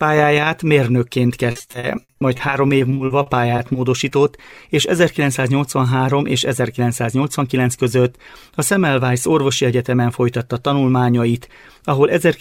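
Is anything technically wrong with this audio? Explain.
Yes, there are two separate faults.

From 1.51 to 4.50 s there is repeated packet loss, producing a robotic sound. About 25 short gaps arrive in quick succession. Each is covered by stretching the last good sound, roughly a fifth of that span in all, with the longest hole at 60 ms. The audio turns choppy, with pieces missing. On a spectrogram this looks like a broken ladder of smeared, repeated slices. The waveform shows flattened, copied segments and abrupt dropouts.

From 6.21 to 7.58 s there is a jitter buffer speed-up. The receiver held too much buffered audio and trimmed it back by cutting out short pitch-period pieces many times over, about a tenth of a second in total. The audio runs at 106% speed with unchanged pitch and sounds slightly hurried. On a spectrogram, harmonics keep their spacing while events bunch closer in time. 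The waveform shows tiny splice points and compressed spacing.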